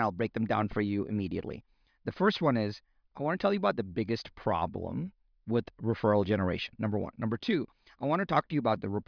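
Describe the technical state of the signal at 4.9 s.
At 4.9 s the speech signal is intact, with no audible fault at that moment.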